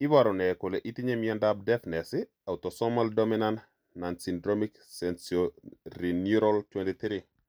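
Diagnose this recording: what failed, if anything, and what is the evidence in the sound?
A Bluetooth SBC bit pool drop at the codec stage, from 6.35 s to 7.48 s. The speech turns dull and gritty as the upper sub-bands lose their bits and the rest are coarsely quantised, which fits a fall from bit pool 31 to 15, roughly 105 kbps.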